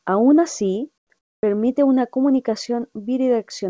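Speech over a call path band-limited at 8 kHz, with comfort noise in place of the background at 0.98–1.10 s (about 17 dB quieter) and 1.19–1.43 s (about 17 dB louder): featureless synthetic noise, likely from discontinuous transmission.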